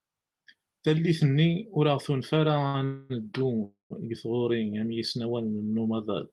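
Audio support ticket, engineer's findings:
Short stall from a late packet, 2.67–2.79 s: speech held about 65 ms with slight buzz or dip, then resumes intact. Jitter buffer briefly underran; shorter than the freezes.

Call audio freeze, 2.85–3.12 s and 3.64–3.92 s: 251 and 259 ms fading buzz or hiss, the second decaying to about 140 ms silence; speech continues unbroken afterward. Likely delayed packets emptying the jitter buffer.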